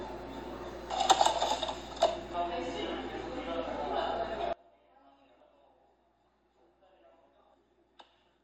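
At 4.53 s an audio dropout leaves a faint residue about 30 dB down until the end, likely a lost source feeding a still-live path.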